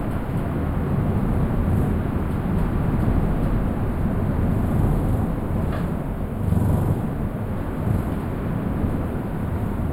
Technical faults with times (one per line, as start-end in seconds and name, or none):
0.00-9.93 channel delay (comb filtering)